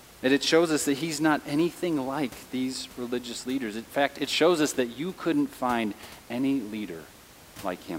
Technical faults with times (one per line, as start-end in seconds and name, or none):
none